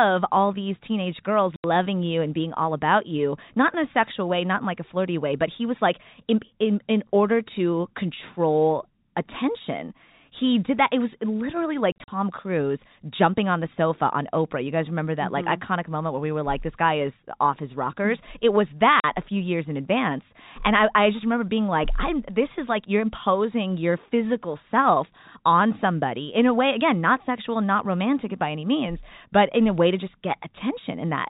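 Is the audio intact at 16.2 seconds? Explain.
Yes, at 16.2 seconds the speech is intact, with no fault at that moment beyond the narrow, telephone-band sound of the G.711 coding it passes through.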